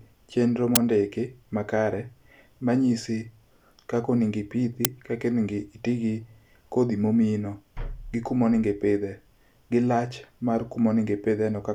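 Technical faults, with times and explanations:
0.76 s and 4.85 s, uninitialised buffer: two sharp, loud bursts of digital noise, about 12 ms and 6 ms long. A block was played before any audio was written to it, so stale memory came out as samples. The lengths fit blocks of 512 and 256 samples.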